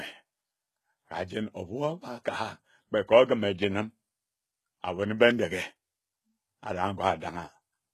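Throughout the speech the treble sounds bright yet synthetic, with s sounds gritty and lispy and nothing above 12.3 kHz. This is likely HE-AAC compression at a very low bitrate, around 16 kbps. Unlike a plain low-pass, the upper band is rebuilt from copied lower bands, so its harmonics don't line up.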